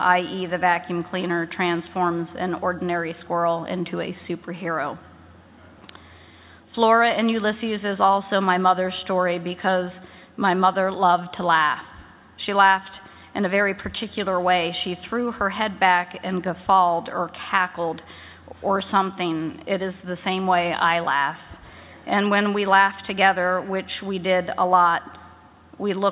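Nothing in this audio stands out as a technical fault; it just runs along without any glitches worth pointing to.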